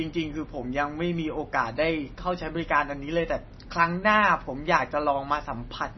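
From start to finish the speech carries heavy damage, likely from MP3 compression at a very low bitrate, consistent with roughly 24 kbps. Nothing survives above 5.9 kHz, so sibilants lose their hiss and the sound turns dull, with a watery, swirling texture as weak frequency lines flicker in and out. On a spectrogram this shows as a flat ceiling at 5.9 kHz and a speckled, patchy look where those lines switch on and off.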